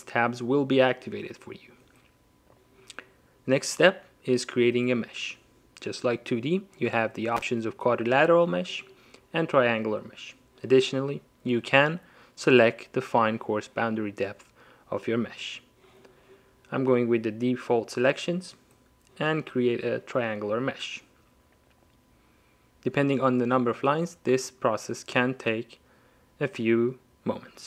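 No technical faults can be heard anywhere in this clip.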